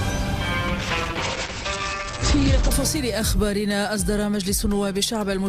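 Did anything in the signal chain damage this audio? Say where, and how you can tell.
Yes, a call bitrate drop in the codec stage, driven by the call's bandwidth estimate. From 0.68 s to 2.77 s the sound turns rough and watery and loses its top end, with the bandwidth falling from about 20 kHz to 8 kHz, consistent with the encoder being pushed from roughly 48 kbps down to around 10 kbps. The audio stays continuous, with no gaps or concealment artefacts, which rules out packet loss, and the added coarseness shows it isn't a simple low-pass filter.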